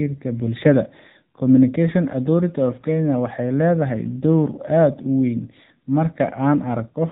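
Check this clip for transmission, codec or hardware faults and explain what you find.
One codec fault runs through the whole clip. AMR narrowband mobile codec: throughout, speech sounds buzzy and synthetic, consistent with a low rate near 8 kbps; a spectrogram shows everything cut off sharply at 4 kHz.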